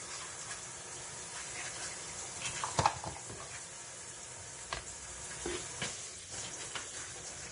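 A low-bitrate encode, likely Vorbis compression, runs through the whole recording of sounds, with damage heavy enough to point to roughly 33 kbps. The encoder spent its few bits on a smooth spectral outline and quantised the treble so coarsely that fine detail became noise of similar energy. Nothing survives above 10.6 kHz, and what remains below sounds hissy and grainy, with roughened tones and smeared attacks.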